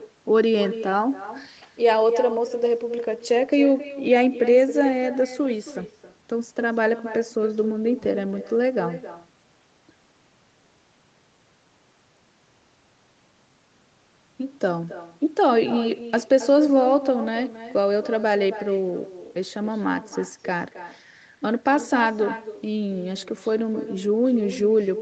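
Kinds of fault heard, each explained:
Echo with no canceller: The far end plays the call on a loudspeaker, and its microphone sends it back unremoved. Every phrase returns roughly a third of a second later. The copy sits about 13 dB below the speech, thinner, throughout.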